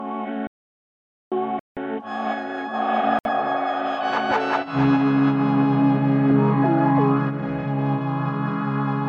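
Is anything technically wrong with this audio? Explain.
Yes. There are three breaks to silence, of two kinds.

From 0.47 to 1.32 s there is an audio dropout to silence lasting about 0.84 s. The sound stops abruptly and resumes in mid-flow, and the gap is silent with no room tone, so the input was likely cut off while the recorder kept writing. Unlike a stall, it doesn't pick up where it left off: whatever happened during those 0.84 s is simply missing.

Two much shorter Bluetooth stalls follow, from 1.59 to 1.77 s (173 ms) and from 3.19 to 3.25 s (62 ms). Each is a brief pause to silence, likely caused by the wireless link holding back packets until the headphone buffer emptied. The giveaway is the continuity: the sound resumes as if paused. The gaps are also short and irregular, not one long hole.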